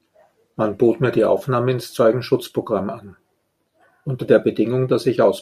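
No technical faults detected anywhere in the recording.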